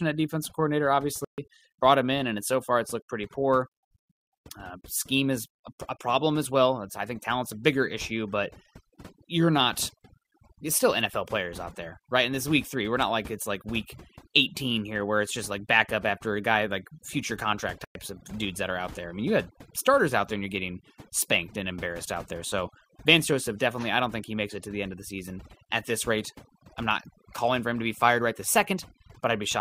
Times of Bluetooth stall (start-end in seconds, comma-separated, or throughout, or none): 1.25-1.38, 17.85-17.95